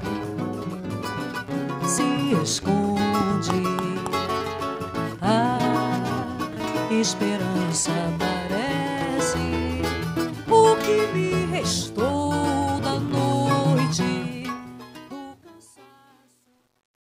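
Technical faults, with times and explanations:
14.14–17.04 s, truncation distortion on a fade: as the fade-out from around 14 s sinks, the level stage rounds samples to coarse steps with no dither, consistent with roughly 10 bits. From 14.92 s the waveform turns blocky, so the tail sounds gritty.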